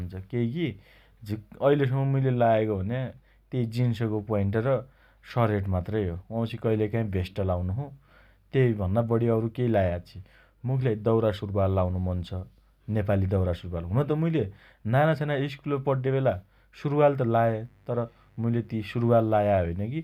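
From 17.36 to 19.27 s, mains buzz appears: switching spikes on 50 Hz power add a raspy, low-level hum with harmonics stacked upward on the spectrogram.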